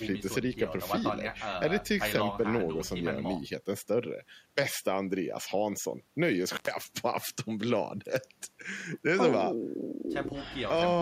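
At 6.54 s the speech drops out in an intermittent contact fault lasting until about 6.71 s. A loose plug or cable lets the connection open for roughly 100 ms. Crackle marks the break and the return, and the signal path is interrupted in between.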